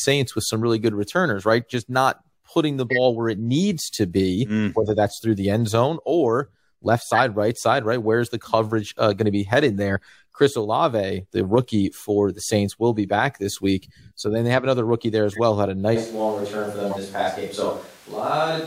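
Speech with two kinds of fault. Corrupt frame decoded: five short bursts of misplaced energy, each one or two frames long, at 2.90–2.99, 7.13–7.19, 11.95–12.04, 15.31–15.39 and 16.90–16.98 s, loudest at 2.9 s and quietest at 11.95 s. From 15.97 s to the end the sound turns roomy and hollow, about 5 dB lower, with more audible room noise, likely a switch to a distant microphone.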